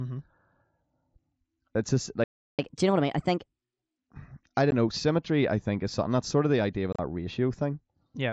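At 2.24 s the speech cuts off in mid-flow and the output falls silent for about 0.35 s, until 2.59 s. This is a playback stall, most likely the player running dry of buffered data or having its output thread blocked. On a waveform it appears as a flat line with abrupt edges. A spectrogram shows a blank vertical band across all frequencies before the sound resumes where it stopped.

From 2.59 s to 3.98 s the player works through that backlog with a catch-up at higher speed. It resamples to play 1.25 times faster, so speech becomes hurried and its pitch rises by roughly four semitones. On a spectrogram the harmonics and formants shift upward and syllables crowd closer together. At 3.98 s everything snaps back to normal pitch and pace.

At 4.71 s, just before "know symmetry I think", there is a 15 ms hole of unconcealed Bluetooth headset packet loss. That duration fits two lost 7.5 ms frames. 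At 6.93 to 6.99 s, after "of the idea of", more losses totalling about 52 ms are scattered over 60 ms, the longest gap 30 ms, giving a brief rough, chopped crackle. On the waveform these are sharp-edged dropouts. On a spectrogram they are thin blank slivers, all within the roughly 8 kHz band of the mSBC link.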